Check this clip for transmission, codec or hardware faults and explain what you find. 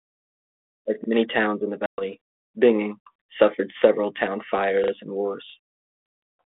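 Three faults occur: two repeated-buffer stutters and one packet-loss gap on what sounds like an ADPCM telephone link. The line is band-limited to roughly 250 Hz to 3.6 kHz with light coding noise, consistent with G.726 at 32 kbit/s.

At 1.04–1.08 s and 4.84–4.92 s there is a repeated buffer. Fresh audio did not reach the output in time, so the device replayed the segment it already held. Each replayed piece is 40 ms long. It plays once extra at the first point and twice extra at the second. Because the repeats are inserted rather than substituted, no speech is dropped. Each repeat has a hard seam, so you hear a short mechanical stutter, and the later one is longer.

From 1.86 to 2.02 s there is packet loss on the ADPCM call. About 120 ms of audio, several packets' worth, went missing and was filled with silence. This leaves an abrupt, hard-edged dropout. The ADPCM decoder tracks the signal through an adaptive predictor and step size, and during the hole its state drifted away from the sender's. 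When speech resumes, it comes back slightly distorted, then settles within a few tens of milliseconds.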